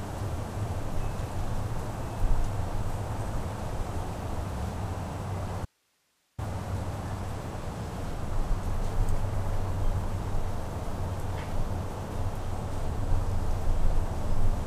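At 5.65 s the sound drops out abruptly for about 0.73 s, until 6.38 s, leaving only hiss around 45 dB below the normal level. This audio dropout to a faint residue likely comes from a brief loss of the source while the downstream path stayed live.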